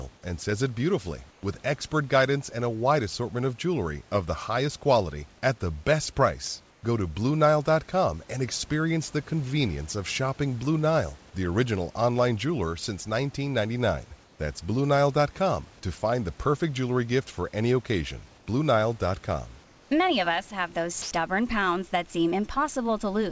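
After "and says it beautifully" at 1.31 s, and at 6.71, 14.24, 18.38 and 19.64 s, comfort noise replaces the background for 0.09 to 0.27 s. It sits about 2 dB quieter, smoother than the room noise, likely from discontinuous transmission. At 21.02 s, the voice detector likely dropped the sound. About 60 ms is lost, and steady noise fills 90 ms. Nothing is heard above 8 kHz.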